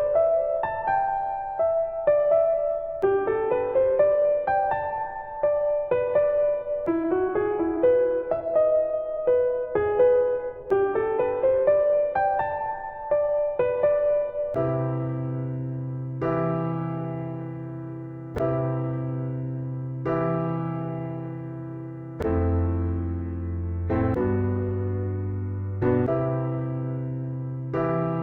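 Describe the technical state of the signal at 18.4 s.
A repeated buffer sits at 18.35 s, just before the moment asked about. Fresh audio failed to reach the output in time, so the device replayed its most recent block a second time. The block is short, which fits a 10 ms buffer, so the doubled piece doesn't register as a stutter. It comes across as a click or brief buzz, with hard joins at each end of the repeat, and roughly 10 ms of the original audio is lost.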